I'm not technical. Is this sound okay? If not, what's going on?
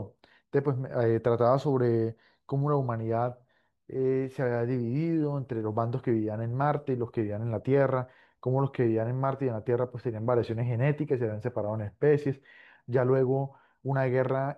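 Yes, no audible faults.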